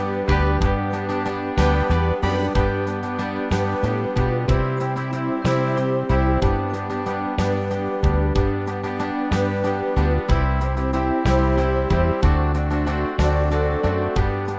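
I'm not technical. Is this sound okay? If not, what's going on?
Yes, it sounds fine.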